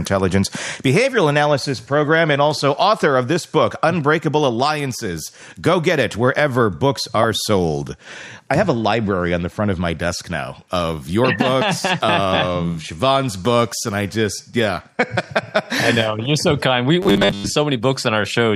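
From 17.02 to 17.54 s the audio turns into a rigid, metallic buzz pinned at 100 Hz, heard as robotic sound from repeated short buffers. The likely cause is audio arriving too seldom, so a 10 ms chunk is replayed over and over in place of most of the real signal.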